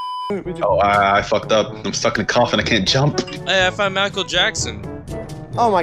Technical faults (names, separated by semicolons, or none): dropped buffer (overrun)